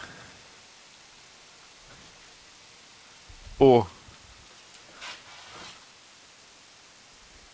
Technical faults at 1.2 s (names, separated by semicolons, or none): low bit depth with dither; echo leak